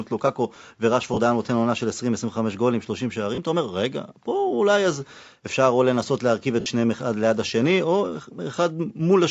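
Bluetooth LE Audio frames were lost three times: at 1.14–1.18 s, at 3.35–3.38 s and at 6.60–6.66 s. Each time, the decoder filled the gap by repeating the last spectrum with randomised phase. The first two gaps last about 30 ms, which fits three 10 ms frames. The third lasts about 60 ms, consistent with six. Each one turns the speech into a short, noisy smear, and the longest begins fading before the sound resumes.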